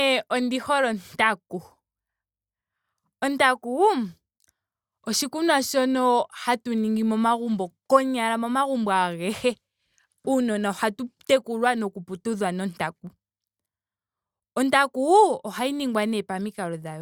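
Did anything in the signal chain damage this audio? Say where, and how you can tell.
No, nothing in this speech recording points to damage at any stage of the chain. No stage, from the wiring through to playback, left an audible mark on the signal.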